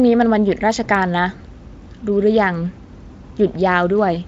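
A speech clip carrying CD scratch ticks: three brief clicks between 0.71 and 1.18 s, none longer than a millisecond or two, spaced at a steady interval that matches one disc revolution. A surface blemish wiped out more data than error correction could restore, so the player patched or muted those samples. On a spectrogram each tick shows as a thin vertical broadband line, while the waveform shows a tiny spike or momentary flat gap. Behind this, the spectrum of the Speex-coded audio stops at about 7.7 kHz.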